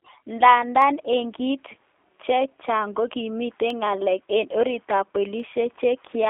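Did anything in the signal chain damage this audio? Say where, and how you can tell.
Yes. At the codec stage, the whole clip carries the sound of G.729 coding. Nothing reaches above about 3.5 kHz, and the speech sits in a telephone band of roughly 300 Hz to 3.5 kHz. It has a rough, slightly synthetic texture that fits an 8 kbit/s G.729A stream. The codec rebuilds each 10 ms frame from a vocal tract filter, a pitch predictor and a few sparse pulses, so fine detail is replaced by a modelled approximation.

Dropped samples produce three sharp single clicks, each a thin vertical line across the spectrum. They fall at 0.82 s just before "en kit", at 3.70 s between "chaang kokimiten" and "ngelelik en orit ap", and at 5.40 s right after "ngelelik en orit ap". Each is a jump in the waveform where only a handful of samples, a small fraction of a millisecond, went missing. That is too brief to remove any sound and points to a likely buffer or driver handoff slip.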